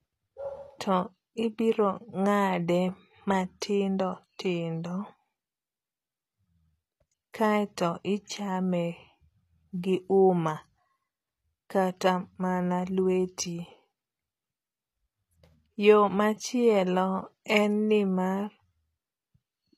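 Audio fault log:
Throughout: HE-AAC compression, likely. The treble of the speech sounds bright but synthetic, with s sounds turning gritty and lispy. The upper band seems rebuilt from copied lower bands under a coarse envelope, so its harmonics don't line up. The damage fits a bitrate around 24 kbps.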